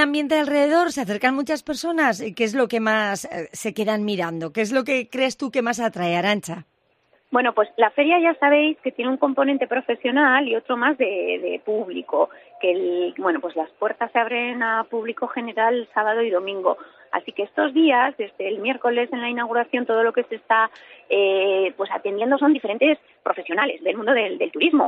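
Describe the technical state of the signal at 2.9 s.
At 2.9 s the signal is intact, with no audible fault at that moment.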